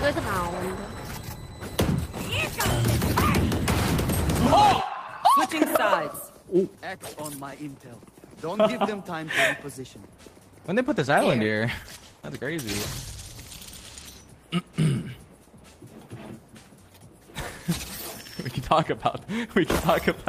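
From 10.83 s to 14.79 s there is a call bitrate drop. The encoder starts coding more coarsely, which fits a fall from about 32 to 14 kbps, and the sound turns rough and duller for about 2.1 s at its worst. Unlike packet loss, nothing drops out or stutters.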